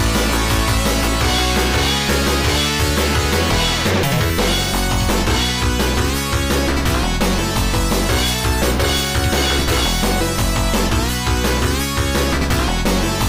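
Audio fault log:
throughout, hard clipping: a harsh, gritty fuzz sits on every loud moment, not just occasional crackle. The signal is driven about 10 dB past what the stage can pass, so around a tenth of samples are sliced flat, and those squared-off peaks spray harmonics high into the spectrum.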